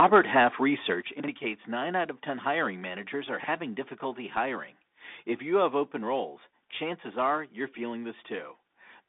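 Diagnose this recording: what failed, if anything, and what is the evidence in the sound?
The audio passed through the headset link's codec, a Bluetooth CVSD channel running at 64 kbps. Speech is confined to roughly 250 Hz to 3.6 kHz, with nothing above 3.8 kHz. The one-bit delta coding leaves a plainly audible granular roughness, and sibilants come through coarse and scratchy.

At the converter, the opening 0.0 to 0.39 s shows microphone overload. Peaks exceed full scale by about 3 dB, so a small share of samples are flattened at the limit. This gives that stretch a harsh, crackly edge, most likely from the input gain being set too high.

In call processing, the microphone volume is stepped down at 1.02 s. Voice and background fall together by about 7 dB in a single jump. This is likely the software's gain control reacting to the clipped peaks just before it.

At the buffer stage, 40 ms chunks arrive out of order at 1.2 to 1.28 s and again at 3.4 to 3.48 s, between "hiring managers are" and "difficulty hiring". 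Each time, one chunk plays one slot late, so the audio briefly jumbles.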